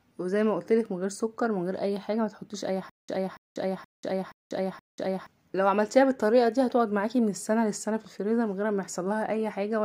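From 2.90 s to 5.27 s there is a stutter with silent gaps. A 284 ms burst repeats five times, once every 474 ms. Digital silence of 190 ms separates each repeat. A stall in playback or streaming is the likely cause. The audio meant for that stretch is lost.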